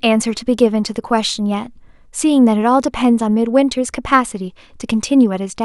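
No technical faults are audible.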